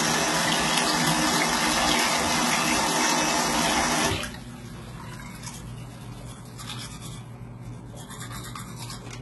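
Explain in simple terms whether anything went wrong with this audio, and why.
Throughout, the treble sounds gritty and metallic and ends near 11.8 kHz, likely from HE-AAC compression, which fakes high frequencies by copying lower ones upward.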